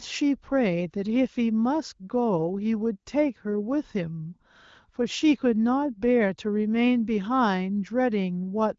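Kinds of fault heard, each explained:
No kinds of fault are heard in this clip.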